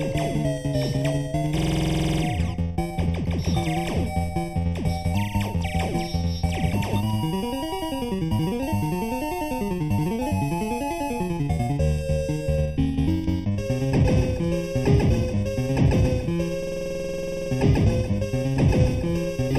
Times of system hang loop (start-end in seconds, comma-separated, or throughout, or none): 1.58-2.23, 16.63-17.51